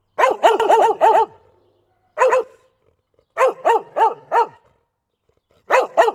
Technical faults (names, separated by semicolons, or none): dropped samples; doubled audio track